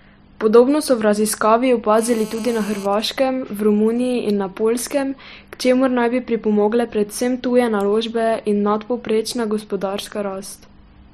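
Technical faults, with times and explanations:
1.99–2.86 s, GSM phone buzz: a nearby 2G phone in a call transmits 217 times a second, and the rectified pulses become a hard, harmonic-rich rasp about 19 dB below the speech.
2.93–5.34 s, GSM signalling bursts: with the phone's user silent mid-call, only sparse burst groups arrive, rectified into faint even ticks with a longer 217 Hz buzz twice a second.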